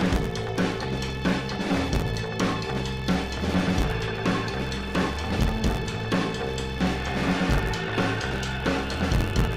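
A steady buzz at about 86 Hz runs under the sound from start to finish, rising and falling with its level. The cause is a filter restarted on every block: losing its state at each boundary, it emits a small transient every block, a rate that fits a 512-sample buffer.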